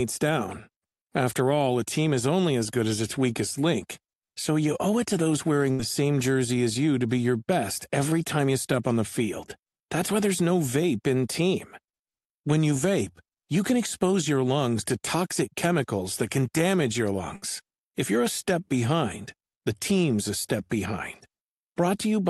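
At 5.71–5.82 s and 17.36–17.45 s, a burst of packet loss leaves about 60 ms of speech missing. The receiver stretches and fades the last sound for 75 ms and then 62 ms, showing as a smeared, decaying band before a jump.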